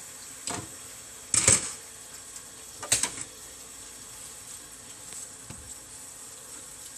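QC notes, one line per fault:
Throughout: MP2 compression, plainly audible. The sound is dull and carries a gurgling, granular roughness, likely from MPEG Layer II coding at a low bitrate, around 80 kbps. Starved sub-bands drop out, flickering highs in and out, while the remaining bands are coarsely quantised.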